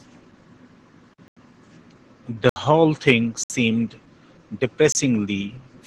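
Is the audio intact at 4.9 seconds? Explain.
No, there's a break right there. From 4.92 to 4.95 s, about 27 ms of the audio drops out as a block of digital silence, most likely because the output buffer wasn't filled in time. The signal cuts off and comes back with no fade, and at this length it reads as a short hole in the speech.

That moment also carries the Opus voice compression heard across the whole clip. The damage is plainly audible and fits a low rate of around 16 kbps. The codec is running in its hybrid mode, with the linear-prediction coder handling the lower band and the transform layer covering content above 8 kHz, in 20 ms frames. Because the excitation is coded so coarsely at that rate, the speech comes out muffled, a little hoarse and slightly robotic.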